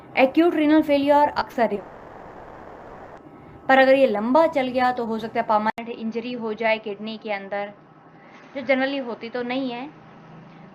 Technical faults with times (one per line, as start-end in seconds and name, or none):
1.39-1.79 short concealed packet loss
1.79-3.19 long network dropout
5.70-10.74 input switched to a poorer device